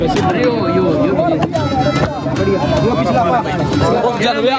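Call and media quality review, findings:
Gain pumping, throughout. Gain swing of around 15 dB. Likely cause: input gain set far too high, with a fast limiter/compressor clamping down on each peak. Dynamics squashed. Waveform: flattened, near-uniform peaks. Content tops out near 8 kHz, in line with the call microphone processing's band limit.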